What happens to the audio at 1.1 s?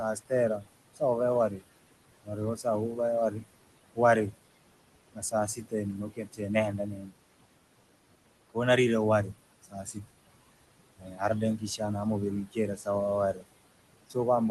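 At 1.1 s the speech is being cut by the noise suppressor. Between 0.0 and 1.63 s the suppressor mistakes stretches of speech for noise and pulls them down along with the background, by up to about 21 dB, for roughly 0.4 s in all. Soft consonants and word endings sound swallowed or faint. Noise suppressor artifacts are also present here: the steady noise is lowered by about 21 dB frame by frame, so it sinks between the words and rises under them.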